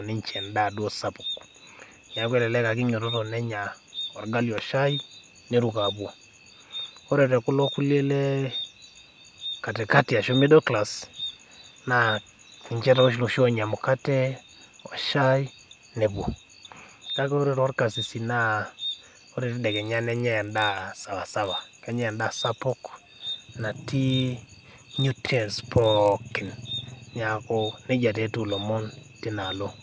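Resampler restarted on every block, from 19.7 s to 26.94 s. The rate converter here seems to have processed each 20 ms block in isolation, which fits a conversion from 44.1 kHz down to 16 kHz, so its filter was missing the neighbouring samples at every block edge and left a small error at each boundary. Because the blocks are so short, those errors repeat at 50 Hz and merge into a low buzz that rides on the speech and stops whenever the signal does.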